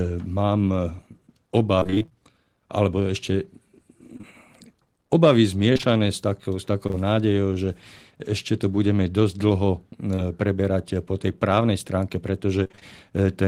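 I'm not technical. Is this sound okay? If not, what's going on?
No. The call's connection kept dropping small pieces of audio, and the receiving end patched each hole by stretching out the sound just before it.

The first problem is repeated packet loss (robotic sound), from 1.79 to 2.13 s, from 5.73 to 6.95 s and from 12.63 to 12.83 s. Here the losses came one after another. In the first and last stretches, about half of the sound is patched-in filler, so the voice turns choppy. The middle stretch is longer but only lightly hit, with brief stutters scattered through it.

The second problem is short concealed packet loss, a single tiny gap of about 20 ms at a time. Two gaps fall back to back between 4.17 and 4.25 s, and one more comes at 10.15 s. Each time, the missing moment was filled by continuing the sound just before it and then blending back in. This is heard as a brief smear or wobble, and a short sound at that point may be lost.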